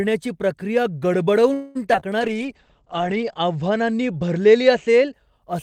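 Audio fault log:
1.53–1.77 s, call audio freeze: the last sound is held and stretched into a fading buzz or hiss for about 0.22 s, then the speech resumes exactly where it stopped. The likely cause is delayed packets draining the jitter buffer, so the call now runs 0.22 s later.
1.93–1.96 s and 2.00–2.03 s, short concealed packet loss: two brief smears, each covering 20 ms of audio that never reached the decoder in time. The receiver extrapolated the preceding sound across each gap and then blended back into the real signal.
2.20–5.20 s, call bitrate drop: the encoder rate falls from 32 kbps to 10 kbps and stays at its lowest for about 1.2 s. Audio bandwidth shrinks from 20 kHz to 8 kHz, so the speech turns muffled and coarse, with a watery texture, until the rate recovers.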